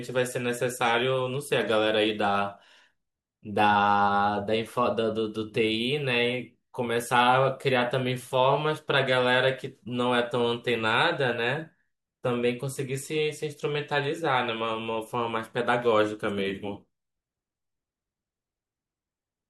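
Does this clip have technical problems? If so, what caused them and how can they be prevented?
No, nothing technical trips up this recording of speech at any point, so there's nothing here that needs fixing or preventing.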